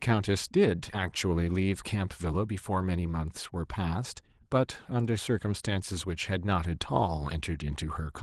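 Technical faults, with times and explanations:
No technical faults can be heard in this recording.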